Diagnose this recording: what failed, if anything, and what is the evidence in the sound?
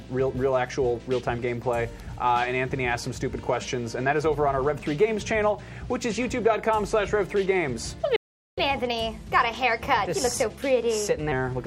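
At the playback stage, the player likely ran out of buffered data or had its output thread blocked, causing a playback stall. The sound drops to silence mid-flow from 8.16 s to 8.58 s, a gap of 0.41 s, and then resumes.

Still in playback, the player works off its accumulated backlog by resampling, a catch-up at higher speed. From 8.58 s to 11.32 s the sound runs 1.15 times fast and sits about two semitones sharp, then returns to normal pace and pitch.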